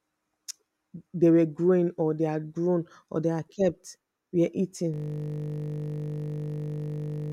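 A system hang loop begins at 4.94 s, just after "they had kept were", and runs to the end of the clip. The computer or audio driver stopped supplying new samples while the sound hardware went on replaying the same 20 ms stretch of its ring buffer, well over a hundred times. Because the loop is so short, the speech gives way to a steady, flat buzz at 50 Hz, with no further words.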